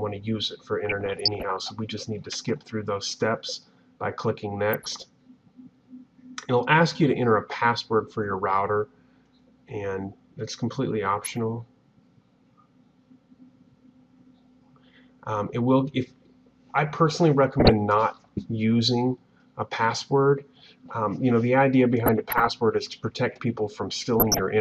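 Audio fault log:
0.86 to 1.56 s, 4.73 to 5.02 s, 11.19 to 11.34 s, 17.50 to 17.70 s, 22.00 to 22.49 s and 24.20 to 24.39 s: DAB burbling. Six short patches of burbling over the sound, the longest being the first at about 0.7 s. Weak reception lets roughly 0.4 to 0.7 percent of bits slip through the error protection into the MP2 audio, so corrupted samples put short blips of noise in single sub-bands and corrupted scale factors make sub-bands jump in level for up to a frame, which gives the burbling.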